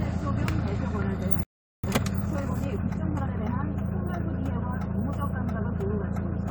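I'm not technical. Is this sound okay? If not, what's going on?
No. At 1.43 s the sound suddenly cuts out and there is silence for about 0.4 seconds, until 1.84 s. It then resumes. This is a playback stall. The likely cause is that the player briefly ran short of audio to play, or was held up doing something else, so it had nothing to send to the speakers and simply went quiet until it caught up.

From 1.84 s to 3.44 s the sound runs noticeably fast, about 1.25 times normal speed, yet its pitch stays the same. This is time-compressed catch-up. Having fallen behind during the silence, the player makes up the lost time by snipping out tiny slices of sound and smoothly blending the joins. That trimming hurries things along without raising the pitch.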